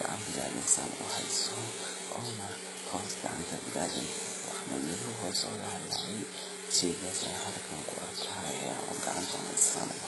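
Throughout the speech, the treble sounds synthetic and stops completely at 11.5 kHz. Sibilants turn gritty and lispy, with a metallic sheen. This is likely HE-AAC compression at a very low bitrate, around 12 kbps. The upper band is rebuilt from copied lower bands, so its harmonics do not line up.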